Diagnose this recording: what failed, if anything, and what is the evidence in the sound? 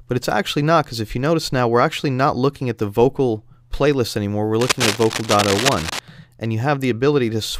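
Analogue wiring is the suspect here: from 4.60 to 5.99 s there's a dense, ragged scratching laid over the sound, sitting only a little below it. That's cable scratch noise, likely from a worn connector or cable being moved, its contact resistance jumping around.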